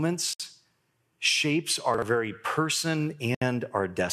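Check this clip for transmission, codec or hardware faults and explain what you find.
The speech has two faults: gaps at joins between encoded pieces, and one spot where chunks play out of order.

Gaps at a join of encoded pieces occur at 0.33 to 0.40 s (63 ms) and 3.35 to 3.42 s (68 ms). Separately encoded pieces were joined untrimmed, leaving encoder delay and padding. The speech stops abruptly, then resumes where it left off.

Chunks out of order occur at 1.94 to 2.02 s. A 40 ms chunk plays one chunk late. The speech sounds briefly jumbled.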